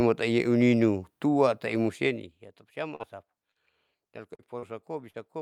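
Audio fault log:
2.95–3.02, 3.51–3.58, 4.35–4.42, 4.59–4.65 and 5.10–5.17 s: short concealed packet loss. About 40 ms of the speech failed to arrive each time. The receiver bridged each gap by extending the preceding sound and then blending back, leaving a brief smear or wobble rather than the hard silent hole of an unconcealed dropout.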